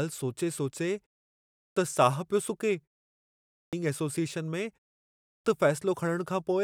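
At 1.38, 3.34 and 5.08 s, the speech has a clipped start after a pause. Each follows a pause of 0.38 to 0.55 s. The output device dozes in silence and wakes late. About 0.37 to 0.39 s is swallowed, so speech bursts in abruptly, missing its opening sounds.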